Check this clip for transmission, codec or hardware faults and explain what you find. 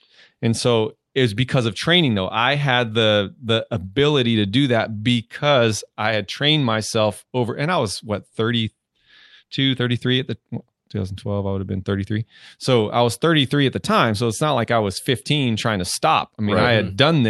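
The speech shows two related timing faults, heard over an Opus call path whose audio tops out around 12 kHz.

Clock drift between sender and receiver runs through the whole clip. The sender's clock runs roughly 4 percent fast, so the receiver's jitter buffer keeps overfilling. The receiver must keep discarding audio to hold latency down, which produces small, irregular hiccups throughout.

Repeated timing corrections run from 0.34 s to 17.28 s. The receiver keeps cutting short pieces out of the stream, all in the same direction but unevenly spaced, and the net playback speed comes to 104 percent. Each cut is slight.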